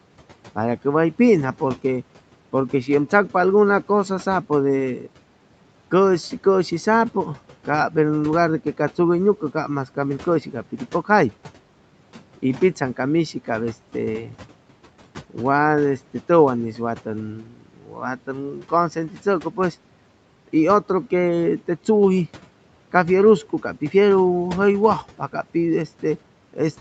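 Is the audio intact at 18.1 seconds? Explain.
No. At 18.1 s the audio is inside a stretch of speech cut by the noise suppressor, running from 17.4 to 18.72 s, just after "tʉwan'is wa". The suppressor mistook speech for background noise and pulled it down by up to about 13 dB. For roughly 0.7 s in total, the speech sounds faint and swallowed.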